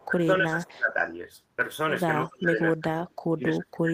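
Right at the start, from 0 to 0.06 s, there's a faint echo leak: a delayed copy of the speech trailing by 253 ms, sitting well below the main level. It's most likely a far-end speakerphone whose echo canceller didn't fully scrub what its mic picked up, so a scrap of it came back down the line.

From 0.07 to 0.97 s the speech gets suppressed in double talk. For most of that window it dips in and out, dropping by something like 25 dB at its deepest. The likely story is both sides talking at once, with the canceller unable to tell its own talker from the loudspeaker echo and clamping down on both.

From 2.18 s to the end it happens again, and harder, with drops reaching roughly 30 dB. Inside that, at 2.24 to 2.28 s, another very faint echo leak pokes through at the same 253 ms delay, even quieter than the first.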